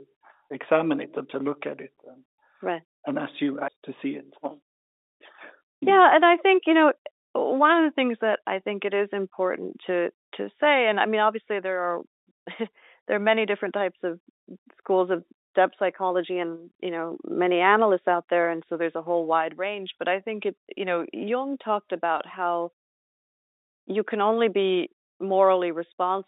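At 22.18 to 22.20 s, a 20 ms gap from packet loss with pitch repetition, which fits a single lost packet, is bridged by repeating the last pitch period. It sounds like a brief buzzy hold. On a waveform, identical repeated cycles appear; a spectrogram shows steady harmonics within the telephone band.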